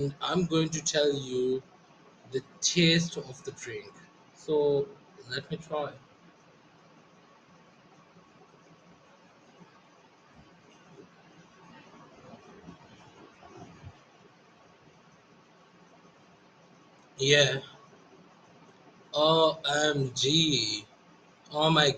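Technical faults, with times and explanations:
Throughout, noise suppressor applied to music or sounds: a suppressor tuned for speech stays active and mistakes sustained tones, ambience and reverb for noise, pulling them down by around 20 dB. Onsets pass, but held sounds and decaying tails sink, so the audio pumps and thins.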